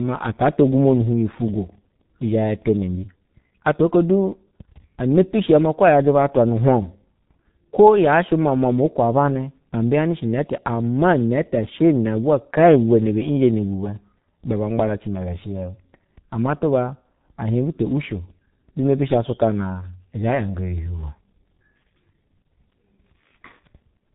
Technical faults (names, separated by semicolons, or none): G.723.1 codec